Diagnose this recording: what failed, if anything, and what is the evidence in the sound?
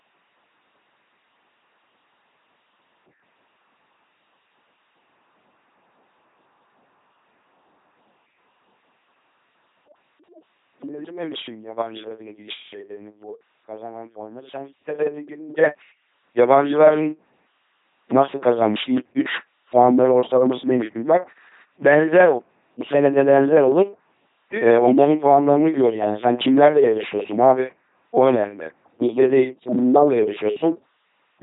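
The codec stage failed: the speech passed through an LPC-10 vocoder, and the damage is heavy throughout. Each moment is driven as buzz or hiss through a ten-pole filter, giving a mechanical robot voice with nothing above 3.9 kHz, which fits a roughly 2.4 kbit/s link.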